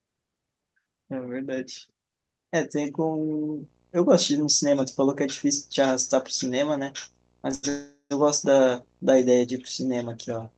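Video or display buzz runs from 3.18 s to the end: a faint 59.94 Hz field-rate buzz with hash and a 15.7 kHz line tone, picked up from a screen or video cable. A short stall from a late packet at 7.55 to 7.65 s holds the last sound for 82 ms, with a slight buzz or dip, while the empty jitter buffer waits, then resumes without loss. A call audio freeze follows at 7.69 to 8.12 s. A 414 ms fill buzzes or hisses and fades, with about 90 ms of silence, most likely because packets were held up in transit. The audio then resumes where it stopped.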